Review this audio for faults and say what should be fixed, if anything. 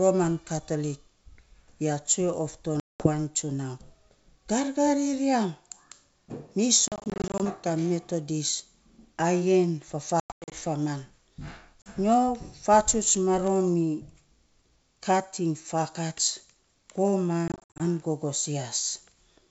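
Packet loss on an ADPCM call at 2.80–3.09, 6.88–7.41, 10.20–10.52, 11.82–11.92 and 17.48–17.82 s leaves hard-edged silent holes. Afterwards the decoder's predictor is out of step, so the sound returns slightly distorted. Plain dropouts would resume cleanly. Add jitter buffering, FEC and packet-loss concealment.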